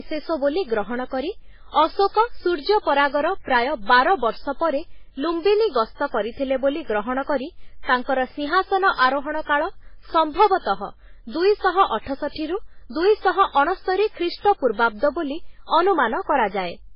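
Throughout the speech, hard clipping flattens the loudest peaks, with the signal driven about 6 dB past the limit. A small fraction of samples are cut, giving brief crackle on peaks. Across the whole clip, nothing remains above 5.3 kHz, and artefacts of two different codecs sit together. This likely comes from transcoding between lossy codecs, which fits a low-bitrate MP3 re-encoded to Vorbis.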